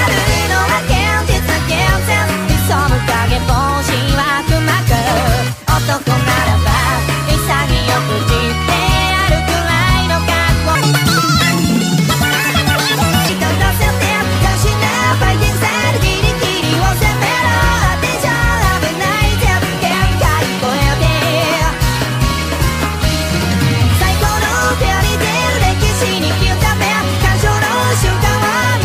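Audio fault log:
10.75–13.29 s: section at the wrong speed. The audio abruptly runs 1.74 times faster than recorded. It sounds hurried and jumps up by about ten semitones, with speed and pitch rising together. The likely cause is this stretch being played against the wrong clock.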